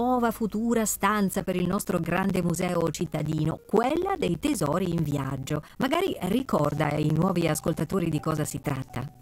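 From 1.33 s to 9.15 s the audio suffers periodic USB or driver dropouts. Every 64 ms, some task stalls the USB bus or the audio driver. A short slice of signal, roughly 10 ms, is lost and replaced by silence. Well over a hundred such gaps follow at that steady rate. They sound like an even stream of ticks, about sixteen per second. The ticks are heard only where there is signal.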